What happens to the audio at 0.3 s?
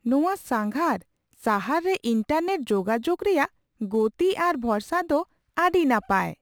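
At 0.3 s, crude rate conversion is audible, as it is throughout. Repeated nearest samples, fitting a 44.1 to 48 kHz change, add a gritty inharmonic fizz roughly 30 dB below the speech.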